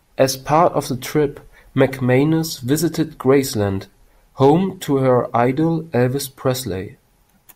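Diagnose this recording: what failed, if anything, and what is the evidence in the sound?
Hard clipping occurs in the speech at 4.42 to 4.50 s, a burst of about 80 ms. Only there do the peaks hit a ceiling and flatten. The overload is small, about 2 dB past full scale. It is heard as a brief crackle on the peaks rather than a sustained fuzz. The flat tops add high harmonics that were not in the voice. The stage is the converter or a fixed-range sample-format conversion that could not pass the peak.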